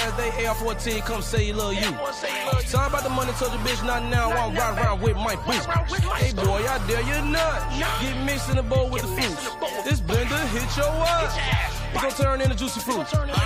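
No technical faults can be heard anywhere in the recording. The sound carries on without any break or disturbance from beginning to end.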